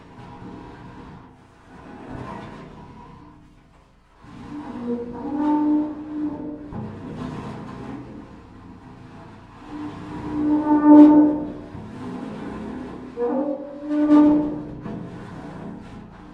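No technical faults are audible anywhere in these sounds.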